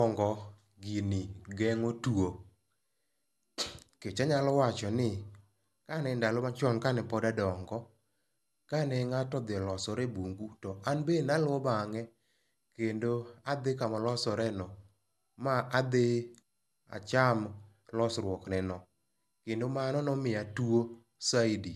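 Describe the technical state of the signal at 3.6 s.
At 3.6 s the speech carries generation loss that runs through the whole clip, likely from about ten rounds of MP2 coding at 128 kbit/s. The accumulated re-quantisation sounds swirly and hollow, with blurred attacks. A spectrogram shows nothing above 12.5 kHz and smeared onsets.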